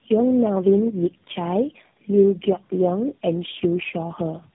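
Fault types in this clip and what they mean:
Tandem speech coding: the speech has passed through about three low-rate speech codecs in a row, each re-encoding the previous one's degraded output. The result is rough, muffled and warbly throughout, with nothing above 3.8 kHz, consistent with chained narrowband coders such as G.729A, GSM and AMR-NB.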